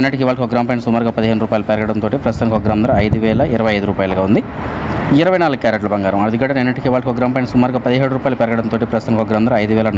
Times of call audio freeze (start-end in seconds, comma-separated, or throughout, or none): none